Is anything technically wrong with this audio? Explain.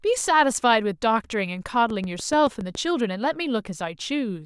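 Yes. From 1.90 to 2.76 s a train of clicks runs over the speech: around seven near-identical pops at a steady 7.1 per second, peaking a few dB above the speech. The likely cause is pulses from interfering equipment or a faulty connection. The clicks' even spacing and matching shape set them apart from random crackle.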